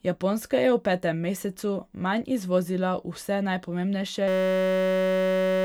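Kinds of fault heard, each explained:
System hang loop: The playback system froze, but the sound hardware kept replaying its last block of audio. From 4.28 s to the end of the speech, one 5.33 ms slice repeats exactly, hundreds of times. That fits a 256-sample buffer. Because the slice is so short, the repeats fuse into a steady buzz at about 188 Hz rather than a stutter. About a second and a half of the real audio is lost under it.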